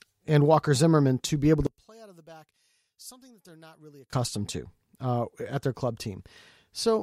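From 1.67 s to 4.13 s, the speech suddenly drops by about 27 dB and turns faint, with the centred voice nearly gone, then returns at full strength. The likely cause is one channel inverted: one stereo channel has flipped polarity, so the material shared by both sides cancels when the two are heard summed. What survives is only the small difference between the channels, a faint copy of the voice.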